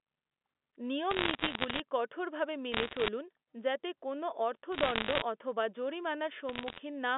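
Bit errors on a digital phone line crackle through this narrow-band telephone speech at 1.11–1.80 s, 2.72–3.08 s (just before "যাতে কোনও"), 4.72–5.22 s (right after "যাতে কোনও") and 6.49–6.80 s. Around one bit in a hundred is flipped on the mu-law line, and each hit corrupts a single sample, so sign or high-order flips become sharp ticks over the speech.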